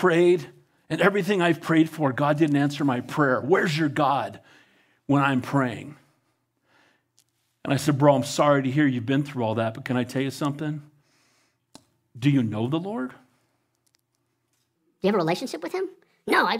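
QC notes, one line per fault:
14.76–16.60 s, section at the wrong speed: the final stretch of speech suddenly runs at 1.41 times its recorded rate, so it sounds hurried and thin, pitched up by roughly seven semitones. Speed and pitch rise together because the samples are being played against the wrong clock, likely a rate mismatch in editing or playback. On a spectrogram, harmonics and formants jump upward at 14.76 s. In the waveform, syllable envelopes are visibly compressed and packed tighter.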